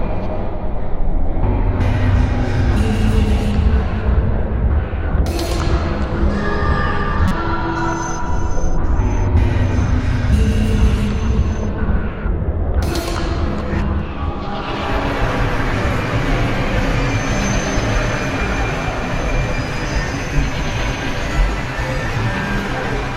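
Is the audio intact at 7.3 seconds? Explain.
No. From 7.28 to 7.32 s there is a brief blip, a burst of noise lasting about 36 ms. This is a corrupt frame decoded: flipped bits inside what appears to be a single compressed frame led the decoder to misread its gains and codes, so it rebuilt that frame with energy placed at the wrong frequencies. The artefact lasts only as long as that one damaged frame.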